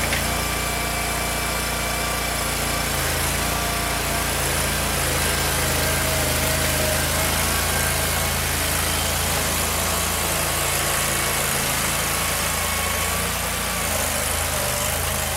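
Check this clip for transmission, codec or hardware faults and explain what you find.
USB whine runs through the whole clip. A steady 1 kHz tone sits about 20 dB below the sound. The bus draws current in 1 ms frames. That pulsing leaks in through power or ground. It is heard as a thin whistle that never changes pitch.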